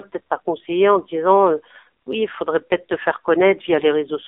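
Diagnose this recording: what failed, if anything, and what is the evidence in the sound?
Throughout, the speech sounds thin, buzzy and synthetic, confined to 300 Hz–3.6 kHz: codec-stage AMR narrowband mobile codec damage, heavy enough to suggest a low bitrate around 6 kbps.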